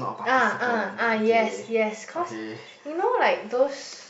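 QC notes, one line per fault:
Nothing to flag here, no faults turned up anywhere in the speech.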